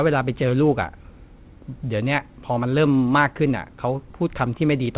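No technical faults occur anywhere in the speech, which comes over a G.711 mu-law call path at 64 kbps with nothing above 4 kHz, as expected for that narrowband codec.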